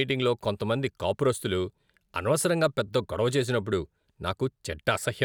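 No technical faults are audible.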